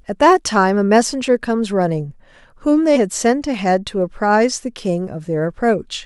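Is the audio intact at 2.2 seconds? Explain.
Yes, the speech at 2.2 seconds is intact, with no audible fault at that moment.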